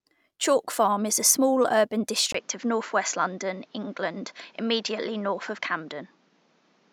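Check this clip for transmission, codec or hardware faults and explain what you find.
One fault is present. At 2.32 s the input switched to a poorer device, likely a narrower-band microphone or headset. A 20 ms silence marks the switch. From then on, nothing reaches above 7.6 kHz, so the speech sounds duller. A new background noise sits roughly 35 dB below the speech. Loudness stays the same.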